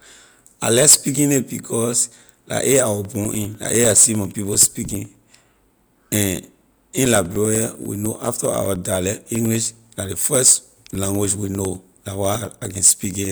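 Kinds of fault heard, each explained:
Periodic USB or driver dropouts: from 3.05 s to 13.25 s the bus or driver stalls every 0.1 s, cutting roughly 2 ms of speech to silence and causing steady ticking. The waveform shows evenly spaced brief gaps; the spectrogram shows thin vertical broadband lines.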